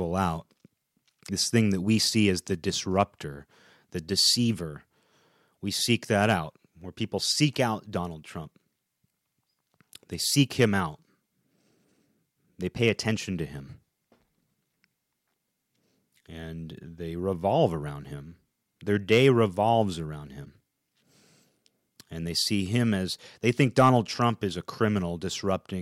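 Hard clipping first appears at 3.00 to 3.02 s, where the speech peaks push about 1 dB past the ceiling of a stage that cannot pass them, so the waveform tops are cut flat. It recurs at 6.22 to 6.33 s and 12.86 to 12.90 s at about 2 dB over, and at 19.12 to 19.28 s at about 4 dB over. The flattened peaks add high harmonics, heard as brief crackle on the loudest syllables, harsher in the later events.

At 20.44 to 20.47 s a short burst of disruption replaces the audio and the sound jumps ahead. Its length fits a single 26 ms MP3 frame. The likely cause is a broken MP3 bit reservoir: after frames were lost, the next frame reached back for borrowed data and decoded bytes belonging to another frame.

Hard clipping returns at 23.47 to 23.97 s, again about 4 dB over. This is the longest event, lasting half a second.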